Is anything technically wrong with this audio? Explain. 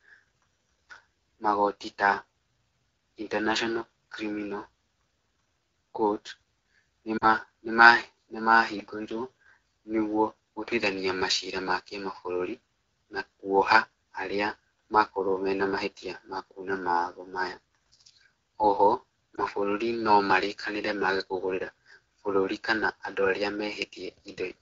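Yes. The whole clip runs through the AMR wideband (HD Voice) codec at a low rate that fits about 8.85 kbit/s. At that rate the vocal tract model and pulse coding are starved of bits. The speech sounds plainly rough and raspy. The top band is only shaped noise.

Lost AMR speech frames occur twice. From 7.17 to 7.26 s, about 40 ms of audio is missing. The decoder repeats the last good pitch and vocal tract settings with falling gain, so the sound warbles, dips, and returns rough. At 19.35 s a single 20 ms loss gives a brief dip just before "mabũrũri nomarĩkanĩre maage kũgũrĩra".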